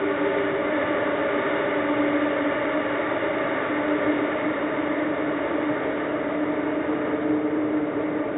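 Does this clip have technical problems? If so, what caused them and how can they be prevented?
No, there are no technical faults in this audio, so there is nothing to trace back or prevent.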